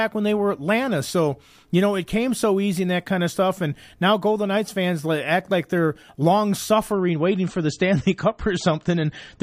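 A speech clip, and at 6.92 s, right after "act like they're long", the quality suddenly drops and stays down to the end at 9.43 s. That's an adaptive stream switching to a lower bitrate: the connection slowed, so the player swapped renditions mid-stream without a gap. Everything above 8.4 kHz disappears and the codec artefacts get worse, which points to a move from roughly 128 kbit/s MP3 down to something like 32 kbit/s.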